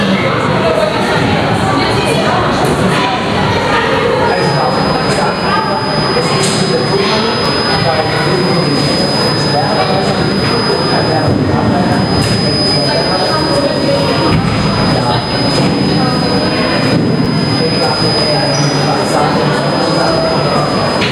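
Gain pumping runs through this whole recording of everyday sounds: the gain swings by roughly 5 dB, flattening the dynamics. The likely cause is microphone gain set far too high with a fast limiter or compressor clamping down on each peak. A feedback whistle starts at 4.22 s and lasts to the end, a steady 5 kHz tone swelling and fading slowly about 10 dB below the sound. It likely comes from a loudspeaker-to-microphone loop sitting just at the edge of feedback, so one frequency rings on without building up. A repeated buffer occurs at 7.45 s and again at 17.25 s. Each is a brief click or buzz where a chunk of about 10.7 ms plays twice with hard joins, which fits a 512-sample buffer replayed once when fresh audio arrived late.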